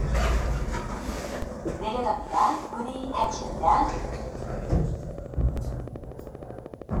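At 1.42 s a low thump lands under the sound: a DC step, where the waveform's zero line suddenly jumps by about -21 dBFS and then drains away as a 20 Hz high-pass pulls the baseline back. From 1.72 s to 6.98 s a steady ticking runs over everything, pauses included, at 13 clicks per second in a regular rhythm. That makes around seventy near-identical pops, peaking a few decibels above the sound itself. This train of clicks is likely interference from nearby equipment or a faulty connection or power supply injecting the same pulse again and again. Beneath that ticking, two further thumps arrive at 3.24 s and 5.57 s. These are DC steps of about -21 dBFS and about -22 dBFS, each shifting the baseline abruptly before the same 20 Hz high-pass lets it settle, while the sound carries on unchanged.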